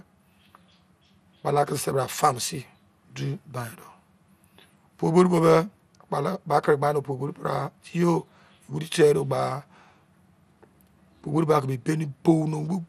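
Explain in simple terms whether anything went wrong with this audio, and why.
Throughout the speech, everything sounds dull and gurgly, with nothing above 15.1 kHz. This is likely MP2 compression, whose grainy, flickering treble sets it apart from simple, steady muffling.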